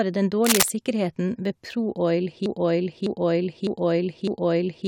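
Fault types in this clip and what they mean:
Cable scratch noise: From 0.45 to 0.68 s, a dense, ragged burst of scratching and rustling sits over the speech, roughly 5 dB louder than the speech itself. The uneven crackle fits a connection whose contact resistance is jumping about as it moves, most likely a worn cable, connector or control being disturbed. The noise is added on top of the signal and stops once the contact settles.
Broken-record loop: From 2.46 s to the end of the clip, a 0.61 s fragment of speech plays four times back to back, each repeat identical to the last. This is likely a stall in the player, encoder or stream, which kept putting out the last piece it held. The speech that should have followed is missing for the rest of the clip.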